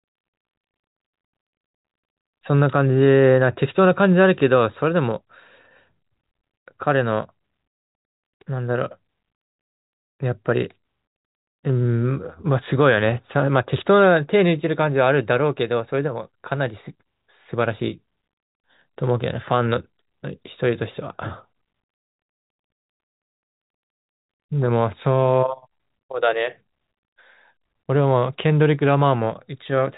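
No faults can be heard.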